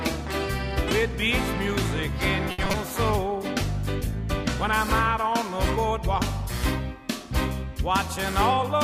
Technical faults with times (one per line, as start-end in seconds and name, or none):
2.51-2.75 repeated packet loss (robotic sound)
3.31-7.35 call bitrate drop